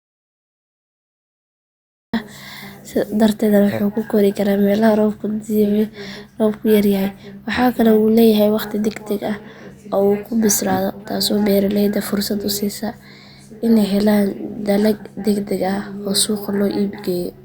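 Audio dropout to silence runs from the very start to 2.14 s: the speech opens on silence, with no room tone, and then cuts in mid-flow. The input was likely lost for that stretch while silence kept being written, so anything said earlier is gone.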